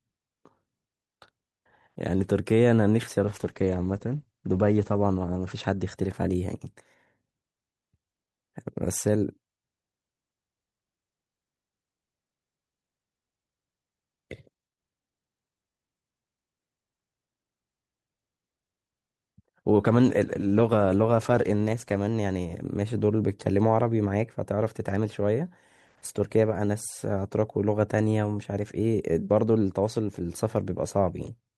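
Speech with two call bitrate drops, at 3.25–6.01 s and 19.81–22.07 s, where coarser coding roughens the sound. The first also loses its top end above about 8 kHz, which suggests the encoder fell from around 64 to 14 kbps. The second fits roughly 17 kbps.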